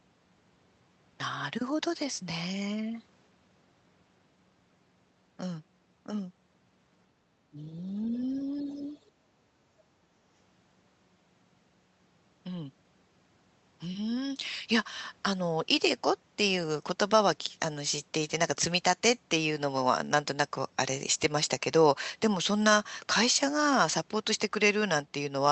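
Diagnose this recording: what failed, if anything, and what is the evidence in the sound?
Speech suppressed in double talk, call processing: the speech dips about 5 dB at 7.54, 8.06–8.17 and 8.44–8.95 s, and about 20 dB at 9.18–9.25 s, likely an echo canceller ducking during overlap.

Other side's voice leaking through, call processing: a faint second voice about 35 dB below the speech at 8.09–8.14 s. It is a separate voice, not a tail of the talker's own room reverberation, likely residual loudspeaker echo.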